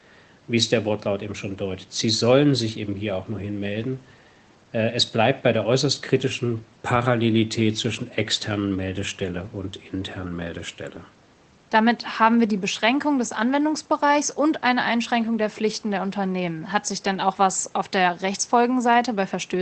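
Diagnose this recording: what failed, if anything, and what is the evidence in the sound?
Nothing failed here; no stage of the chain shows a fault. Faint room noise sits about 35 dB below the speech, and the call codec's band limit takes the top end off at 8 kHz, which fits Opus running at a modest bitrate of around 20 kbps.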